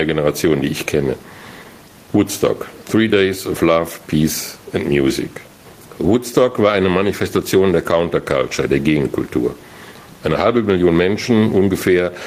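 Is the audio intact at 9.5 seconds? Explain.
No. Gain pumping runs through the whole clip, including 9.5 s, likely from input gain set far too high with a fast limiter pulling it down on each loud sound. The background swells in the gaps and ducks by around 10 dB under speech. On a waveform, peaks look flattened and gaps rise; a spectrogram shows the noise floor brightening between phrases.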